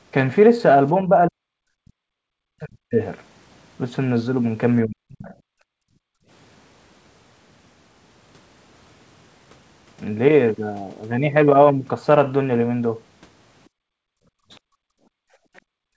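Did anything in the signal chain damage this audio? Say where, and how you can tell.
Yes. At the call-processing stage, speech suppressed in double talk is heard at 1.02–1.11 s (a dip of about 5 dB), then 1.28–1.97, 2.13–2.99 and 4.84–5.33 s, where it falls about 40 dB. The waveform shows abrupt, deep notches. The likely cause is the echo canceller mistaking near-end speech for echo.

The echo canceller also gates the background at 5.61–6.28 s and again from 13.69 s to the end, pulling the room tone down about 40 dB. On a spectrogram the noise floor turns nearly blank, with sharp edges where the suppression engages and releases.

The other side's voice leaks through in two short scraps, at 14.53–14.58 s and 15.56–15.61 s, about 35 dB below the talker. Each appears as a faint, isolated smear inside the gated region, likely loudspeaker echo that escaped cancellation.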